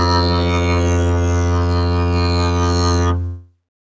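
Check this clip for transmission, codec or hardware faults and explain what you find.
There are no transmission, codec or hardware faults to report in this music, which comes through a G.722 call path that carries nothing above 8 kHz.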